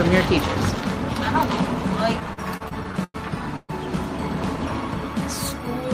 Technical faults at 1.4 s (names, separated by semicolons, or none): none